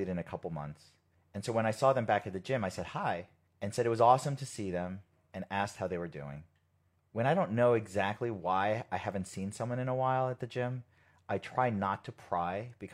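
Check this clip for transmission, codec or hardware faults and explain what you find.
No faults turn up in the clip, so there is nothing to explain.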